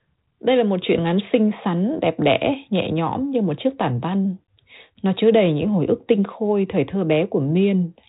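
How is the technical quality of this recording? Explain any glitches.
The technical quality of this recording is sound, with no glitches to explain.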